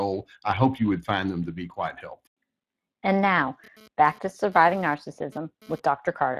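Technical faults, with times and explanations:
throughout Speex codec: the speech has a plainly audible noisy, hoarse coarseness, which fits a bitrate around 22 kbps. It is a CELP codec short of excitation bits. Unlike a transform codec's swirling, the top band is only a shaped noise-like fill, and nothing lies above 15.2 kHz.
3.64 to 5.80 s GSM phone buzz: a raspy buzz at 217 Hz with many harmonics sits about 26 dB below the speech and comes and goes. A nearby 2G phone moving data sends radio bursts that the audio circuit rectifies. Its 217 Hz rate, independent of the speech, sets it apart from mains hum.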